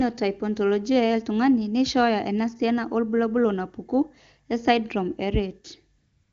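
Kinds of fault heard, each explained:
AMR comfort noise: At 5.97 s the phone judges the talker silent and stops sending speech frames. For the final 0.36 s, up to the end of the clip, the receiver plays synthetic noise. It builds this from a coarse estimate of the background's level and spectrum. The real background gives way to a smooth, steady hiss. The switch is heard as a change in texture, not a drop to silence.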